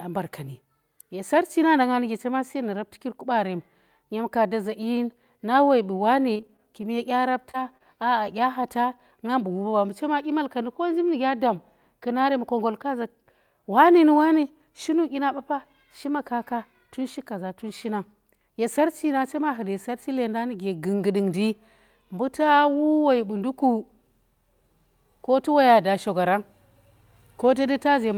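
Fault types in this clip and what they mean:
Repeated packet loss (robotic sound): Between 6.33 and 6.85 s, audio packets kept failing to arrive in time, leaving seven separate holes, the longest 22 ms. The receiver patched each one by extending the sound just before it, so about 97 ms of that half-second, roughly a fifth, is synthetic fill covering 60 ms that never arrived. The rapid alternation of real and invented sound gives a choppy texture with small pieces missing.
Short concealed packet loss: Twice shortly afterwards, at 7.51 s and again at 7.78 s, about 20 ms of audio failed to reach the decoder. Each time the receiver bridged the hole by continuing the preceding sound for about 25 ms, carrying on its pitch where it was voiced or using shaped noise where it was not, before easing back into the real signal. Each is heard as a brief smear or wobble in the speech.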